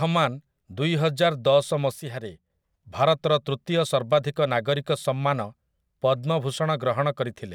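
At 2.0 s the speech level drops abruptly by about 5 dB and stays down until 2.5 s, when it returns just as abruptly. This is a sudden gain jump: the level changes from one sample to the next with no ramp, and the background noise drops and recovers together with the speech. The likely cause is a gain setting or bit shift applied instantly in the digital path, then reverted half a second later.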